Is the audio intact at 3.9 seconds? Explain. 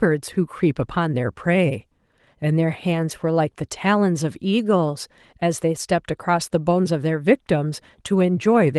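Yes, the audio at 3.9 seconds is intact, with no fault at that moment.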